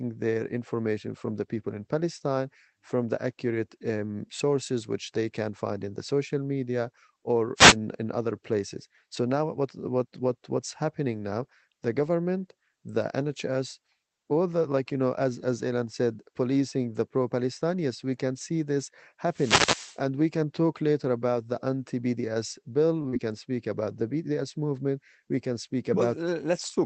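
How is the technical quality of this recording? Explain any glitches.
The recording has three kinds of glitch: two bursts of radio noise and a closely spaced pair of network dropouts near the end. Throughout, the speech comes over a call codec whose bandwidth tops out around 8 kHz, which fits Opus at roughly 20 kbps.

The first wireless microphone noise hit runs from 7.56 to 7.76 s, between "the social media or" and "in other places". The second, longer one runs from 19.28 to 20.02 s. In each, the analogue FM radio link faded as reflected signals cancelled at the receiver. The receiver's own noise came up under the speech, heard as a short swish of static lasting about 0.2 s and then about 0.75 s.

A short stall from a late packet occurs at 23.02 to 23.08 s, just after "the anti bds bill". A packet missed its playout time, so the jitter buffer ran dry. The receiver held the last sound for about 20 ms until the packet arrived, then resumed without losing anything. 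It is heard as a momentarily sustained sound with a slight buzz or dip, and it pushed playback about 20 ms later.

Right after, from 23.09 to 23.15 s, just before "can speak about the", there is a short concealed packet loss. About 40 ms of audio never reached the decoder. The receiver patched the gap by extending the preceding signal and then crossfaded back into real audio. The result is a brief smeared wobble at that join.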